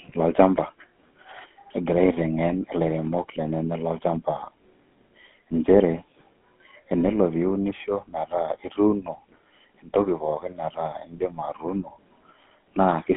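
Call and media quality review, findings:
GSM full-rate codec, throughout: buzzy, gravelly speech texture, band limited to roughly 200 Hz–3.4 kHz. Pulse-excited vocal-tract model discards fine excitation detail, consistent with a 13 kbps full-rate coder.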